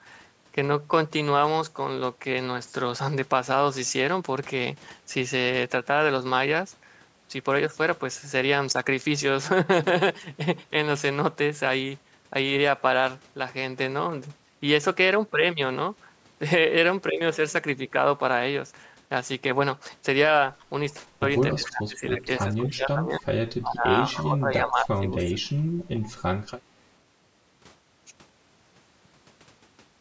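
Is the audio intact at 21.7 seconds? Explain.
No. At 21.7 s the sound is caught up in two overlapping faults. The first is an echo leak from 21.52 to 21.7 s, likely from a loudspeaker on the far side whose echo canceller failed to remove everything its microphone picked up and sent it back. You hear a delayed copy of the speech trailing the original by 276 ms, about 15 dB below the main level, ending right at this moment.

The second is speech suppressed in double talk, running from 21.55 to 23.26 s. With both sides talking at once, the echo canceller likely could not tell its own talker from the loudspeaker echo and turned everything down. The speech dips and loses pieces for about a second and a half in total, with the deepest drop around 20 dB.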